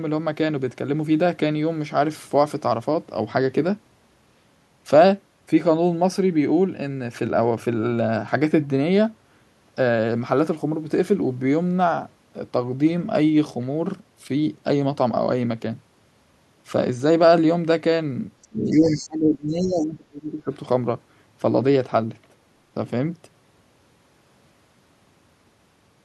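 At 18.42 to 18.47 s, the echo canceller likely failed to strip the far-end playback from the microphone, and the other side's voice leaking through appears as a very faint scrap, about 35 dB under the talker. The same residual echo returns more strongly from 18.73 to 19.08 s, about 20 dB below the speech, and as a brief faint blip at 19.78 to 19.85 s, about 30 dB down. Each time, a second voice sits behind the main one.

From 18.49 to 20.5 s, both sides are talking at once and the canceller likely could not tell its own talker from the loudspeaker echo, so it attenuated everything. This is speech suppressed in double talk: for roughly two seconds the talker's level sags, falling by as much as roughly 25 dB at its deepest, so the voice sounds pulled away while the leaked far-end fragments poke through.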